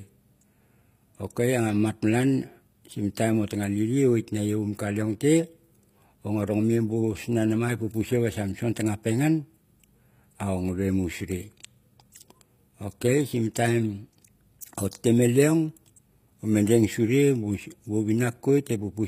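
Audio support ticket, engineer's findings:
Whole clip, start to end, speech: top end sounds fake. Sibilants come out gritty and metallic, lispy. Nothing at all above 15.4 kHz. Damage plainly audible throughout. Likely HE-AAC compression, v2 flavour, at a low rate, something like 24 kbps. Codec keeps only the lower spectrum and fakes the treble by copying lower bands up with a rough envelope, so harmonics don't line up across the crossover.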